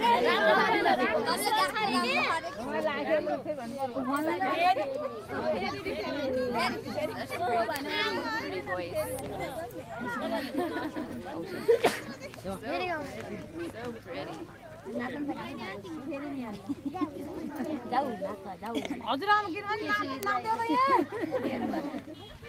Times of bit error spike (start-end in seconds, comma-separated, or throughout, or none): 7.76, 9.19, 20.23